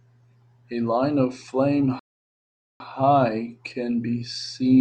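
At 1.99 s the speech halts for a rebuffering stall, the player's downloaded audio running dry, and resumes at 2.80 s exactly where it left off, adding about 0.81 s. The waveform shows a flat gap; the spectrogram shows a blank vertical band.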